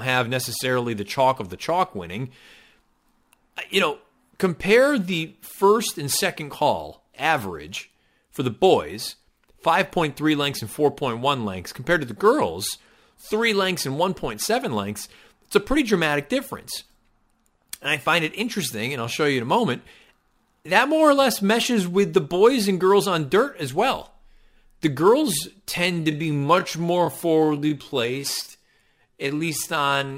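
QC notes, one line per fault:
25.65–30.18 s, time-stretched section: from 25.65 s to the end, the speech abruptly drops to about two-thirds of its normal pace while its pitch stays where it was. It drags, with syllables dragged out. The likely cause is software lengthening this stretch to fill a set duration by repeating short slices of the waveform, which keeps the pitch.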